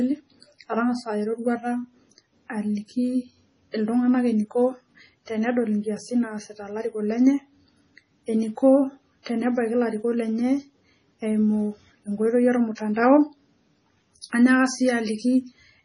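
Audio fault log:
Throughout: MP3 compression, likely from a low bitrate around 24 kbps. The damage is heavy: nothing survives above 10.5 kHz, so the speech sounds dull, and weak frequency lines flicker in and out between frames, giving that watery, swirly texture on s sounds.
9.23 s, 12.75 s, 14.21 s: pre-echo. Each of these sharp onsets gets a short hiss smeared just ahead of it, lasting 36, 23 and 26 ms respectively. The codec spread its quantisation noise across the whole block, so the quiet gap before the attack fills in and the hit itself softens.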